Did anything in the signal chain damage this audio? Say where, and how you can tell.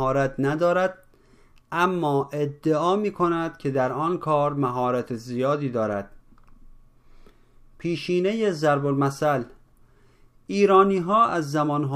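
No, nothing along the chain seems to have damaged this one; I can't point to any stage where it went wrong.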